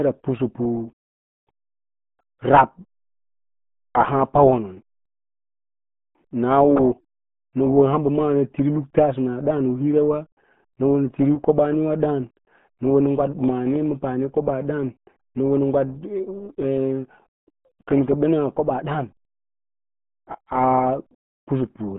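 Speech runs through the whole clip with the muffled, gargly character of the RealAudio 14.4 codec. Content is confined to a narrow band of roughly 150 Hz to 3.5 kHz, with nothing above 3.8 kHz, and the heavy coding damage fits an 8 kbit/s dial-up speech codec. A plain telephone-style band limit would sound thin but clean. Here the voice also bubbles and smears, showing the codec is rebuilding the signal from very coarse parameters rather than merely filtering it.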